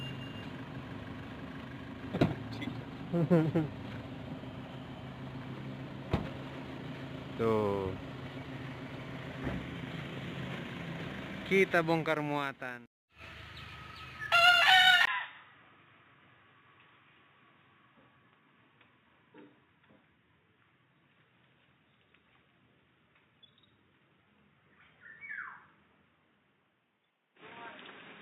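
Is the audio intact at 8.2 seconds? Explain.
Yes, the audio is intact at 8.2 seconds, with no dropout, click, distortion or other fault at that point.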